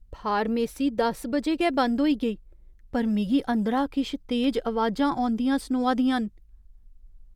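At 4.44 s the speech has a single sharp click, most likely from dropped samples. A handful of samples, well under a millisecond, seem to be missing, so the waveform jumps straight to a later value. Unlike a dropout, no audible sound is lost.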